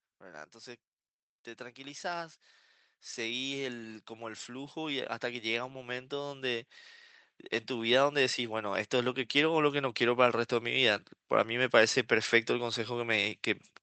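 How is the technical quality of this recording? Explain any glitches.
The recording has two level swells from automatic gain rising. From 3.14 to 6.77 s and again from 7.67 to 10.29 s, the gain control judged the input too quiet and stepped up by about 9 dB, then about 6 dB, lifting speech and background together.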